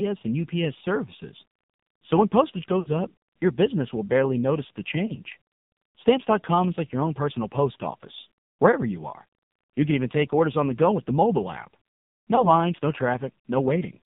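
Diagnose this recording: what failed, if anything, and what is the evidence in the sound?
The codec stage failed: the speech went through the AMR narrowband mobile codec at a very low rate, consistent with roughly 6 kbps. The band is confined to about 150 Hz to 3.7 kHz, and the voice sounds heavily buzzy and synthetic because the pulse-driven vocal tract model has too few bits.

The network stage failed too: lost AMR speech frames. At 2.80 to 3.07 s the voice smears and fades, matching about three missing 20 ms frames where the decoder repeated old settings with falling gain. Briefer warbles at 5.06 to 5.12 s and 12.36 to 12.49 s suggest single lost frames.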